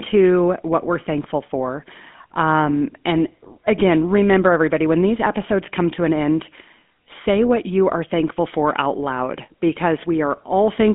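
From start to finish the speech carries the sound of the GSM full-rate codec, with plainly audible damage. Nothing survives above roughly 3.5 kHz, and the lows are thinned below about 200 Hz. The codec rebuilds the voice from a vocal-tract filter fed by sparse, regularly spaced excitation pulses, which gives it a buzzy, gravelly grain. A spectrogram shows a hard ceiling near 3.5 kHz and coarse, smeared harmonics. The character fits a 13 kbps stream.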